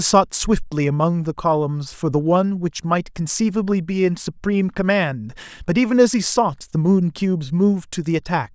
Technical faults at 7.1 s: none

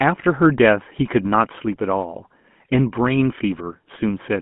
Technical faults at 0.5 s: GSM full-rate codec

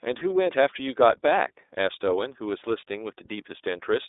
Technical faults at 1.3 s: iLBC codec

